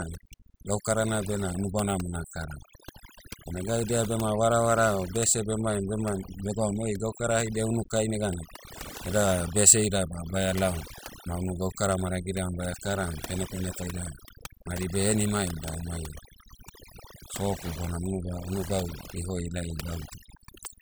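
Throughout this speech recording, overdone noise removal is audible: the background between phrases collapses to near silence dotted with twinkling, chirpy specks. A noise reduction stage set too aggressively is pushing individual frequency bands down or out whenever their level sits close to its noise estimate, so quieter parts of the voice vanish along with the noise. On a spectrogram this shows as isolated bright dots scattered over a dark floor and patchy, eroded speech harmonics.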